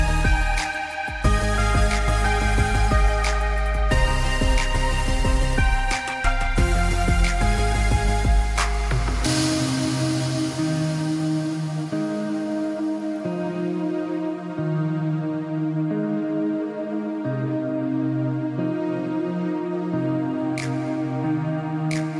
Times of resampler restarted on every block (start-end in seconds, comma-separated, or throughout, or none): 5.52-13.24